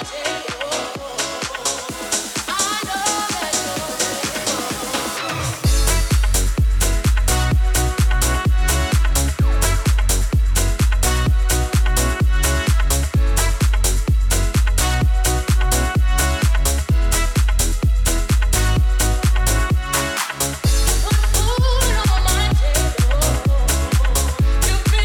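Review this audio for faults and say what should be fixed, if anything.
Nothing here needs fixing.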